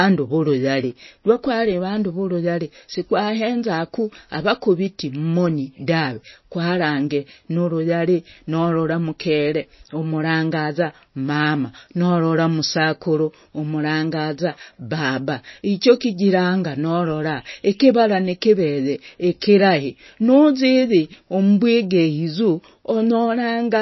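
From start to finish the speech has no treble above about 5.8 kHz, and a watery, swirly texture with smeared attacks sits over everything. That's likely MP3 compression at a very low bitrate, something like 24 kbps, where the encoder drops the top end and leaves weak frequency lines flickering between frames.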